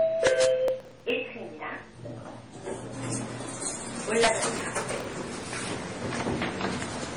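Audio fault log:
Throughout: transcoding between lossy codecs. Nothing is heard above 10.5 kHz, and the audio carries two different layers of artefacts at once: the smeared, swirly texture of a low-rate codec on top of a different, coarser graininess. That combination points to the audio likely having been encoded with one codec, roughly WMA at 64 kbit/s, and then re-encoded as MP3 at 32 kbit/s. A single encode would show one kind of artefact. Here the second encoder spends its few bits reproducing the first one's damage and adds its own.
0.27–0.45 s and 4.23–4.28 s: integer overflow. The loudest peaks exceed full scale by only about 2 dB and then about 3 dB. Instead of being limited, each one wraps to the opposite sign and swings across the whole range. The result is a violent, hard crack on the loud moments rather than the flattened, fuzzy buzz of clipping. A small overshoot producing a much harsher sound than clipping would is what identifies it.
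0.68–1.10 s and 4.56–5.44 s: processor overload crackle. A dense, gritty tearing rides on the sound for about 0.4 s and then for about 0.9 s, and it stops cleanly when the load passes. Each miss simply drops a tiny slice, which fits buffers of about 3 ms, with around fifteen and then around thirty skipped. Isolated dropouts would sound like separate ticks. A run of missed deadlines blurs into continuous crackle instead.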